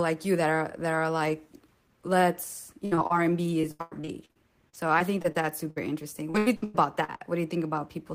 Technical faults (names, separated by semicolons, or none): burst of packet loss; short concealed packet loss; repeated packet loss (robotic sound)